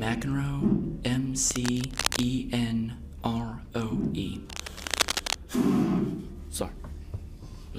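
Cable scratch noise breaks in from 1.51 to 2.26 s, a little below the sound's level, and from 4.49 to 5.35 s at about equal level: dense, ragged rustling, likely a worn cable or connector being moved. Unlike steady hiss or isolated clicks, it comes in irregular bursts.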